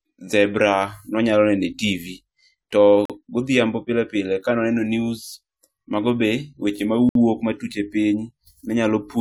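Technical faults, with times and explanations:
3.05–3.10 s and 7.09–7.15 s, gap between stream segments: the speech drops to hard-edged silence for about 43 ms just before "godhiambo pile pile ka", and about 61 ms between "news mago be weche" and "matut e". The two holes fall roughly 4 s apart, which fits a 4-second segment boundary. There, the timestamps of consecutive segments do not quite meet, and the player fills the mismatch with silence. No speech is lost. The timeline is simply stretched by the inserted gaps.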